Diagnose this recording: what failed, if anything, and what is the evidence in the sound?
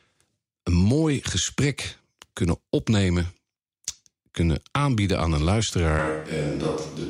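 At 5.99 s, right after "kunnen aanbieden aan een", the speech abruptly turns roomy and thin, drops roughly 5 dB and gains room noise some 35 dB down, through to the end. This is likely a capture-stage switch to a distant microphone.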